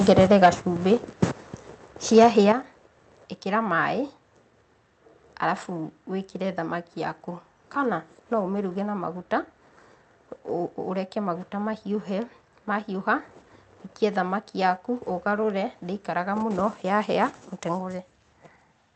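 Speech opens with harsh, crackling distortion from 0.09 to 0.49 s, where the loudest syllables have their tops squared off, likely microphone overload, with the input driven about 6 dB past the converter's ceiling so that a small share of samples sit flat at the converter's limit. The same gritty edge returns from 2.16 to 2.27 s, this time about 3 dB over but with a larger fraction of samples pinned at the limit, so the crackle is denser for its short duration. In both cases the waveform peaks are cut off rather than reproduced.

At the tail of or just after each distorted stretch the whole signal, voice and background together, drops abruptly in level: by about 4 dB at 0.46 s and by about 8 dB at 2.52 s. This is likely a microphone volume stepped down in single jumps, the pattern of call software reacting to clipping by lowering the device input gain. The second step is the larger, pulling everything noticeably quieter just after the second overload. 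Underneath, the audio carries the coding texture of an Opus call path at 40 kbps, with content limited to 8 kHz.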